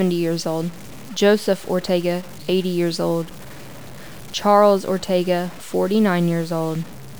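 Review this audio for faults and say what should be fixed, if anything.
Grainy, gritty distortion runs through the whole speech clip and follows the level of the voice. Quiet passages and word tails sputter or snap to silence instead of fading. This is likely low bit depth without dither. Truncating to roughly 6 bits leaves an error that tracks the signal, sitting around 25 dB below it. A waveform zoom shows staircase steps, and a spectrogram shows broadband hash that appears and vanishes with the speech rather than a steady noise floor. To prevent it, keep at least 16 bits and apply dither before any reduction in word length.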